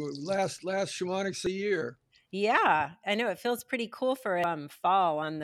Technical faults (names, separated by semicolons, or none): damaged data in a compressed stream